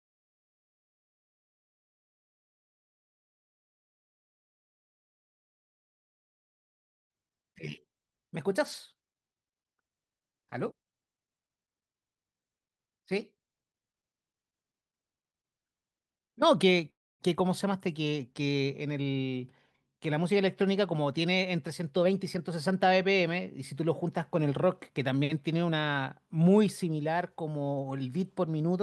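A jitter buffer speed-up trims pitch-period slices to drain excess delay, so this speech runs hurried at unchanged pitch: 11.71 to 13.77 s at 117% (around 0.4 s removed) and 22.03 to 25.11 s at 109% (around 0.3 s). Between them, from 16.90 to 17.22 s, the sound stops for about 0.3 s, mostly silent, then resumes with nothing lost, likely a call audio freeze from delayed packets emptying the buffer.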